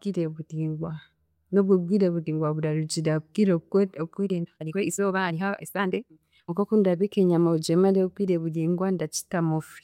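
Speech that suddenly rushes forward between 4.24 and 6.54 s, the pace jumping to about 1.78 times normal while the pitch stays exactly where it was, so the passage sounds hurried before snapping back to the original tempo. This is a time-stretched section, likely the work of software squeezing that stretch to fit a shorter length by discarding small slices of the waveform and splicing the remainder together, which preserves pitch.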